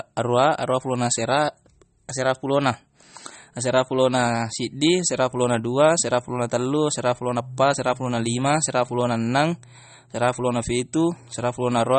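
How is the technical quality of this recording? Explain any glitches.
The recording is heavily compressed, with audible damage throughout. The most likely cause is MP3 compression, present from start to finish. Starved of bits, the encoder has cut all treble above 8.4 kHz and switches weak frequency lines on and off between frames. The speech sounds dull, watery and swirly, with metallic chirps on s sounds, which fits a low bitrate of around 32 kbps.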